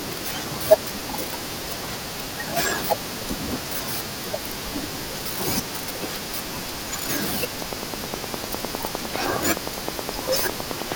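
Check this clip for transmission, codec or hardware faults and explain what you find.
A train of clicks runs from 7.62 s to 10.93 s. Sharp, similar pulses arrive evenly at about 9.7 per second, roughly thirty in all, standing well above the speech. This points to likely electrical interference or a faulty connection or power supply. It sounds like steady ticking, audible through pauses.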